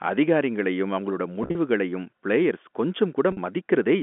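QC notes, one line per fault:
1.43 to 1.55 s, packet loss with pitch repetition: right after "அதிகாரிங்களையும் அவங்களோட", about 90 ms of audio drops out in bursts across 120 ms, the longest 40 ms. The receiver fills each gap by repeating the last pitch period, giving brief held, buzzy stretches over the narrowband G.711 telephone sound.
3.32 to 3.37 s, packet loss with pitch repetition: a single 50 ms gap is patched the same way, with the final pitch cycle looped and faded, so the sound briefly freezes into a buzzy hold.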